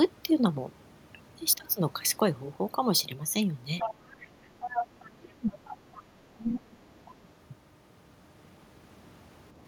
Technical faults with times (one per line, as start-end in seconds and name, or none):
3.79-6.03 other side's voice leaking through
5.03-5.61 speech suppressed in double talk
6.35-6.77 speech suppressed in double talk
6.45-6.60 other side's voice leaking through
7.05-7.11 other side's voice leaking through